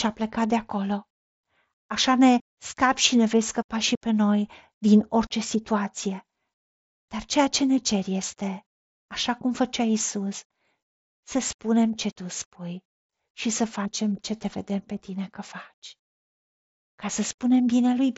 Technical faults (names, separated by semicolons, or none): none